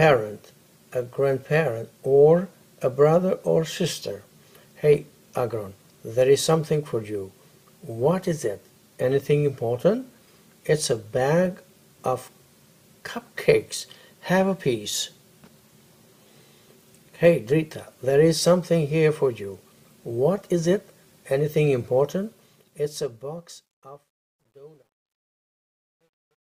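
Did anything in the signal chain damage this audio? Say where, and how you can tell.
Yes. Truncation distortion on a fade runs from 22.25 s to the end at 26.44 s, in the sample-format conversion or gain stage. The fade-out, which begins around 22.25 s, turns gritty toward its tail, worst from 23.92 s onward. The gain stage rounded each sample to a coarse word without dither, which fits roughly 11 bits. As the level approached the smallest step, the waveform collapsed into square steps.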